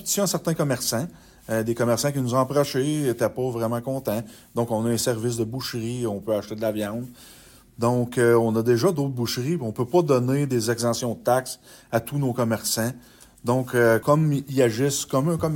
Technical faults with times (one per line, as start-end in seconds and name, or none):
none